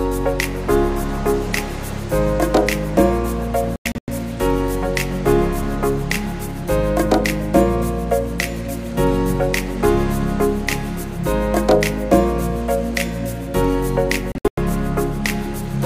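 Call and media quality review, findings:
Digital broadcast dropout, 3.76–4.08 s. Receiver lost sync or frames failed checksum; decoder muted until valid frames resumed. Several short holes totalling 224 ms across 320 ms, longest 96 ms, which fits about seven lost 32 ms frames. Content in the gaps is gone.

Digital broadcast dropout, 14.32–14.58 s. Same receiver muting mechanism. Holes totalling 192 ms scattered over 256 ms, longest 96 ms, which fits about six lost frames. Sound cuts out intermittently, then returns mid-programme.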